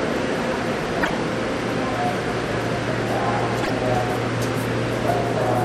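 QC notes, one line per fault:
0.98–1.10 s, damaged data in a compressed stream: a short glitch of about 120 ms cuts across the sound. Corrupted bytes in the encoded stream lead the decoder to misread those frames, so it outputs garbage until it regains sync at a valid frame header.
3.59–3.70 s, damaged data in a compressed stream: a second short glitch of about 110 ms, with the same cause. The decoder loses frame sync on bad data and hunts for the next header.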